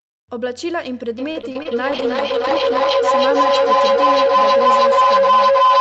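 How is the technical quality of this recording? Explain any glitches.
The technical quality is poor. Three faults overlap in the speech.

From 1.18 s to the end, a feedback howl builds. Two devices in one room loop the sound, growing on each trip. It settles near 1 kHz, the loop repeats roughly every 300 ms, and it peaks about 11 dB above the speech.

From 1.31 s to 1.67 s, repeated packet loss makes the sound choppy and robotic. Four gaps were patched by stretching the last sound. The longest gap is 38 ms, and about a quarter of the stretch is patched.

From 1.92 s to 3.35 s, a call bitrate drop takes the Opus encoder from 32 to 11 kbps. The sound turns rough and watery for about a second at the lowest rate.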